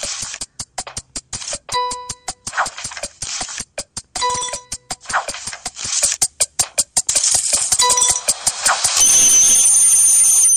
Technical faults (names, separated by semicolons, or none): de-emphasis applied wrongly